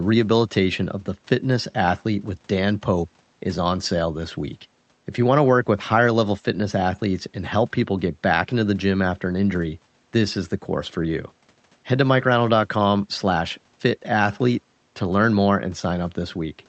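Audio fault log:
No faults turn up here: the quiet room hiss sits far below the speech, and the call path's band limit at around 8 kHz is just how this link carries audio.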